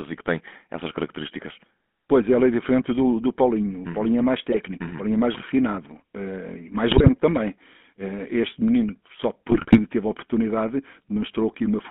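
GSM full-rate codec damage runs through the whole 12-second speech clip. The voice is squeezed into a band of roughly 200 Hz to 3.4 kHz and has a plainly audible buzzy, gravelly roughness. That comes from the vocal-tract model being driven by a sparse, regular pulse excitation, which fits the 13 kbps full-rate scheme. GSM bit errors break in at 4.52–4.59 s, 6.90–7.09 s and 9.50–9.79 s as squawks, pops and gargling. Corrupted filter, pitch and gain values distort the spectrum and level frame by frame, and the second and third bursts are longer.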